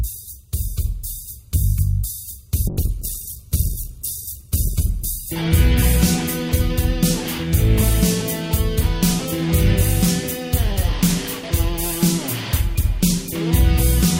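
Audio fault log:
2.68–7.67 s, call bitrate drop: the encoder got starved, so the sound turns coarse and dull for roughly 1.7 s at worst, fitting about 64 dropping to 11 kbps, then clears.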